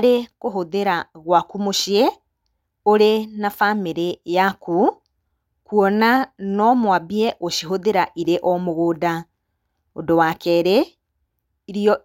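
No technical faults are audible.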